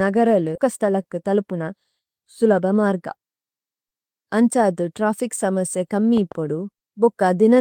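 A speech recording with three distinct faults. At 0.55 to 0.57 s there is a skip ahead: roughly 0.4 s of audio is simply gone, with no fill, so the talker lurches forward and the two sides of the cut are butted together. On a waveform this shows as an abrupt discontinuity where the envelope and phase of the signal jump. On a spectrogram, the formant tracks and harmonics break off and restart out of line, with no silent gap between them. Right after that, from 0.65 to 3.17 s, comes a jitter buffer speed-up. The receiver is working off a backlog by repeatedly trimming tiny slices of one or a few pitch periods, about 0.2 s in total, so the speech runs at about 107% speed while its pitch stays put and it sounds slightly rushed. A spectrogram shows harmonics at normal spacing but syllables and formant transitions squeezed closer together in time, and a close-up waveform reveals periodic cycles spliced out. 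Finally, between 6.17 and 6.34 s, a loud pop is heard as two sharp clicks in quick succession, peaking about 5 dB above the speech, which carries on underneath. These are likely voltage transients from a plug, switch, static discharge or driver glitch. They appear as two narrow spikes standing above the waveform and as thin vertical broadband stripes on a spectrogram, possibly with a brief ringing tail.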